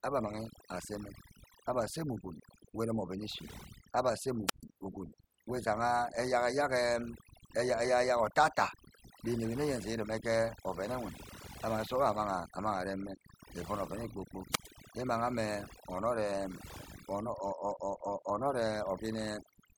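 Throughout the clip the background sits at near silence flecked with twinkling specks. This is overdone noise removal: the reducer was set so hard that frequency bands near its noise estimate were pulled down or shut off, taking quieter parts of the voice with them.

At 4.46 s and again at 14.51 s, hiss rises briefly and the sound then falls into a hole of near silence, 134 ms and 102 ms long, before returning by 4.64 s and 14.68 s. These are wireless microphone squelch dropouts: the analogue FM signal faded until the receiver's squelch muted the output.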